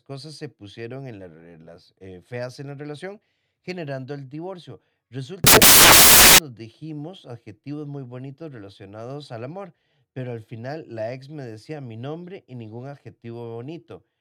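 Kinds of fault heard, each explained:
Samples built from the wrong bytes: the reader is stitching each sample together from the wrong bytes, whether shifted by one, swapped in order or misaligned, so the fast-flickering low bits end up as the big part of every value. In this speech clip that comes out as a burst of loud, harsh broadband noise from about 5.44 to 6.38 s. It's a little under a second, and it stops right before "dijimos adjetivos muy bonitos".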